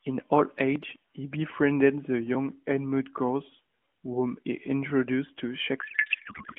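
At 5.82 s the speech collapses into garbled noise and warble that barely tracks it, running to the end of the clip at 6.59 s. This is a codec payload misread. The AMR frames, carried in an octet-aligned layout, are being unpacked as if bandwidth-efficient, so every field lands at the wrong bit offset and the decoder synthesises nonsense from valid-looking frames. Until then the AMR narrowband codec sounds clean, its 150 Hz to 3.4 kHz band and light coding texture fitting the 12.2 kbps mode.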